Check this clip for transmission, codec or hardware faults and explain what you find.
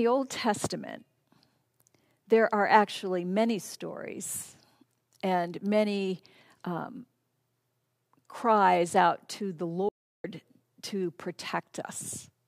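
One fault stands out: an audio dropout to silence from 9.89 to 10.24 s. Right after "cries out to the", the speech cuts off mid-flow and the signal falls to silence, with no room tone, for about 352 ms before resuming abruptly. Whatever was said in that gap is lost. The likely cause is a brief loss of the input, such as a momentary disconnect, failed link or accidental mute, while the recorder kept writing silence.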